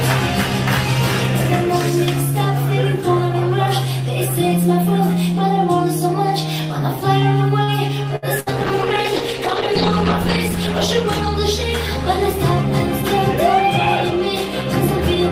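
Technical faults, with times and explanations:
7.63–7.71 s, short stall from a late packet: a packet arrived behind schedule and the jitter buffer drained, so the receiver held the last sound for about 43 ms before resuming from the same point. Nothing is lost, but that sound lingers with a faint buzz or dip.
8.16–8.25 s and 8.40–8.49 s, burst of packet loss: each time a run of packets never arrived in time, leaving about 60 ms missing. The receiver stretched and faded the previous sound across the hole, then jumped ahead, so a brief held buzz or hiss replaces audio.
8.39–13.24 s, call bitrate drop: the bandwidth estimate collapsed and the encoder was forced to spend far fewer bits, consistent with a fall from around 64 to 13 kbps. Coarser coding and a lowered high-frequency limit make the sound rough and muffled, worst for about 2.3 s.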